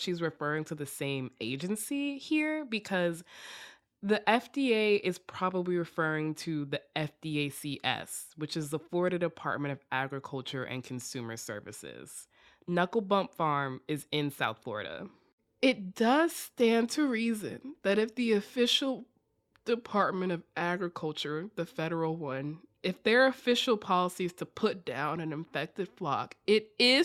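No technical faults can be heard anywhere in the speech. At no point does anything in the sound stand out as a problem.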